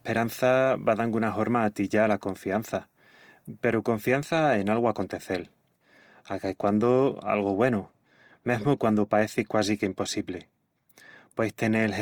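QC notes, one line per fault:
Throughout, Opus compression. The speech sounds rough and grainy, with a noisy edge on voiced sounds, and the damage is plainly audible. The bandwidth stays full, with content reaching about 20.2 kHz. This fits Opus in its music mode at a low rate, likely around 24 kbps. That mode keeps each band's energy. When bits run short, it fills bands with folded or noise content, so detail turns coarse rather than swirly.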